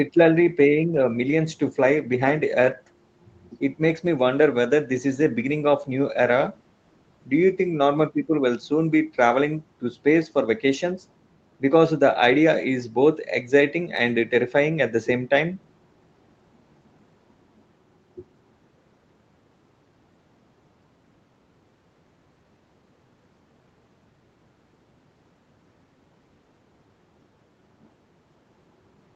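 Listening to the speech closely turned up nothing that stood out as a technical fault.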